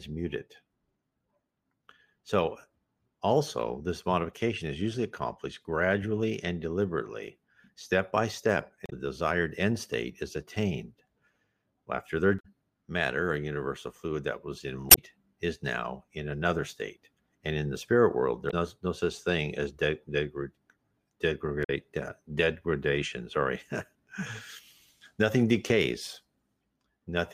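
Damaged data in a compressed stream occurs five times: at 8.84 to 8.93 s, 12.36 to 12.46 s, 14.87 to 14.99 s, 18.47 to 18.54 s and 21.60 to 21.70 s. Each lasts roughly 70 to 120 ms. At these points the encoded bytes were corrupted, so the decoder could not read those frames correctly and lost sync until it found the next valid frame header. Each event is heard as a brief chirp or blip that breaks the sound.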